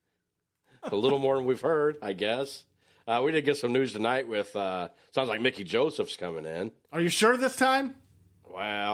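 No technical faults detected.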